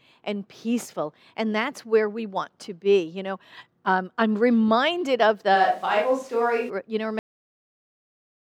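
The close microphone's feed likely dropped out from 5.57 to 6.68 s, just after "um I'm reminded of", leaving a distant pickup: the speech turns suddenly roomy and hollow at similar level, with faint background noise.

At 7.19 s the final buffers were never written, producing a cut-off end: the speech stops mid-sound and falls straight into digital silence without any decay.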